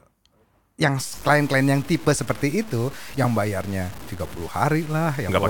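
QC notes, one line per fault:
0.99–5.50 s, low bit depth without dither: the speech turns grainy and gritty, with quiet syllables and decays sputtering or dropping to silence. The error tracks the signal, sitting around 20 dB below it, which fits likely 6-bit truncation with no dither applied.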